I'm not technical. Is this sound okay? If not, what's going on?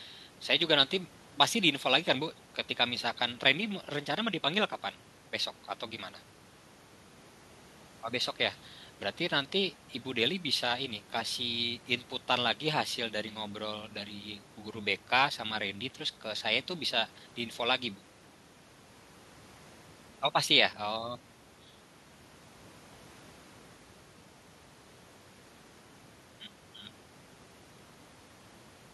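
Yes, nothing wrong turns up anywhere in this speech recording, so there's nothing to fix.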